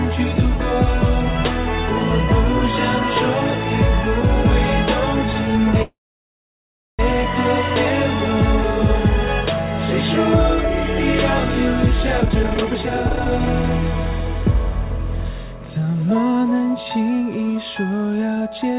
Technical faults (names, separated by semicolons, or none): call audio freeze; jitter buffer speed-up